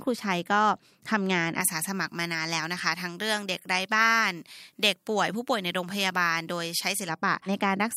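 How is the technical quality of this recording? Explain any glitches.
The recording has one clear problem: pre-emphasis left on, running from about 1.61 s to 7.09 s. Somewhere in the chain the treble was boosted for recording or transmission, and the matching de-emphasis never got applied afterwards. Here the top end sits about 11 dB hotter at 10 kHz than at 1 kHz, and the shape of the lift fits a J.17 curve. The speech comes across thin and over-bright, with sibilants that hiss and spit.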